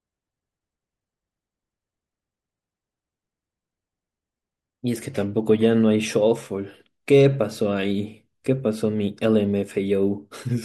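No technical faults are audible.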